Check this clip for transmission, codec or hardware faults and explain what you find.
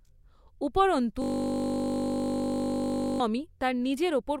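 One hardware fault is present, a system hang loop, from 1.22 to 3.2 s. The driver stalled while the output kept replaying a 20 ms ring buffer, about a hundred times. At 50 Hz that gives a steady buzz, and roughly two seconds of speech are lost.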